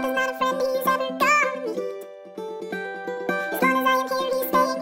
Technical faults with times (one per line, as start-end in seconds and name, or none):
0.00-4.82 audio read two samples at a time (double speed)